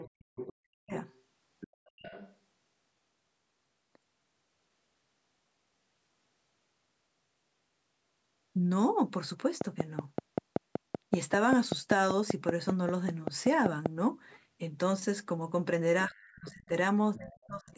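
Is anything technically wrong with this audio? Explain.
Yes, there are two related problems, both at the start and end of the clip, where the person talking and the far end overlap.

Speech suppressed in double talk occurs from 0.0 to 0.93 s and from 16.08 to 17.71 s, totalling roughly 0.7 s and 1 s of affected speech. The likely cause is an echo canceller that couldn't separate the local talker from loudspeaker echo and pulled everything down, by as much as about 40 dB. The voice dips and breaks into pieces. On a waveform the envelope collapses in chunks, and a spectrogram shows dark vertical gaps across the band.

The other side's voice leaking through appears from 0.0 to 2.36 s, from 16.03 to 16.51 s, and from 17.14 s to the end. This is likely residual echo the canceller failed to remove from the microphone signal. A second voice sits about 20 dB below the main speech, and about 25 dB below in the last stretch. 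On a spectrogram it shows as a faint, separate set of harmonics beneath the main voice, all within the call-processed band that stops at 8 kHz.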